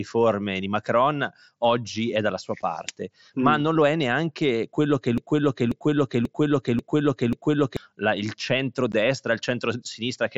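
Speech, carried over a wideband mSBC Bluetooth headset link that limits it to 8 kHz with a light grain on louder sounds, is hit by two kinds of fault. Unconcealed Bluetooth headset packet loss appears at 2.62 s as a 7.5 ms hole, which fits one lost headset frame, and at 8.92 s as a 15 ms hole, which fits two. Nothing fills those gaps, so the sound simply stops and restarts with hard edges. On a waveform each one is a short flat stretch cut cleanly out of the signal. On a spectrogram it is a thin vertical blank strip across the whole band, sometimes with a faint broadband tick at its edges. From 5.18 to 7.77 s a broken-record loop takes over. A fragment of about 0.54 s plays five times back to back, identical each time, and whatever should have followed is lost. The likely cause is a stall in the player, encoder or stream that kept resending the last buffered piece. On a spectrogram this shows as the same block of harmonics and formant shapes tiled side by side at a regular spacing. 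The waveform shows an identical envelope repeating, often with a small discontinuity at each seam.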